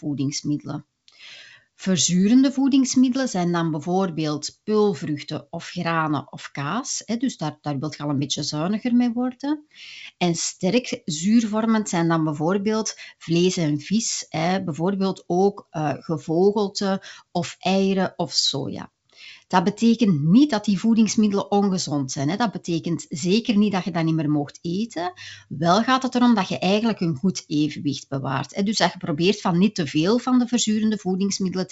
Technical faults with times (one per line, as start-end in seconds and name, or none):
none